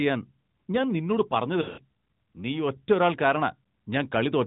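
From 1.62 to 1.80 s, lost AMR speech frames break up the sound. About 140 ms is missing, scattered over 160 ms, with the longest run about 80 ms, which fits seven 20 ms frames failing. The decoder repeats its last good pitch and vocal-tract settings at falling gain, so the sound smears and sags toward silence, then returns briefly weak and rough. A plain dropout would cut off abruptly instead. Over the narrowband AMR carrier, nothing passes above 4 kHz.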